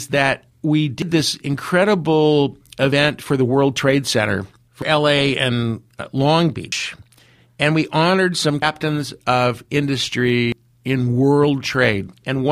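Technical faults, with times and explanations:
1.02, 2.92, 4.82, 6.72, 8.62 and 10.52 s: audio missing between chunks. Speech jumps ahead by about a tenth of a second every 1.9 s with no silence at the joins, likely lost between 2-second recording chunks.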